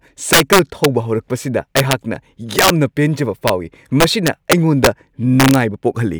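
A gain stage in this speech clip is pushed past its integer limit and wraps to the opposite sign instead of clipping, an integer overflow, so loud peaks flip across the full range as harsh cracks at 0.33–0.85 s, 1.77–1.93 s, 2.59–2.70 s, 3.48 s, 4.00–4.87 s and 5.40–5.55 s, overdriven by about 1 to 6 dB.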